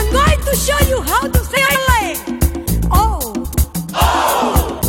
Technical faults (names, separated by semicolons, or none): frames out of order